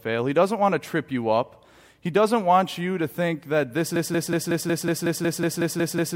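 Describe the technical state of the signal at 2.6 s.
At 2.6 s the speech signal is intact, with no dropout, clipping, glitch or other technical fault at that point.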